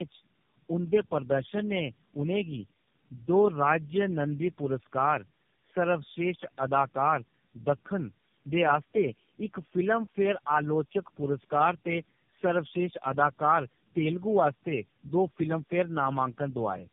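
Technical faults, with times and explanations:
throughout: tandem speech coding. The speech was re-encoded through several narrowband codecs in turn, compounding roughness and warble beyond any single low-rate codec, with nothing above 3.4 kHz.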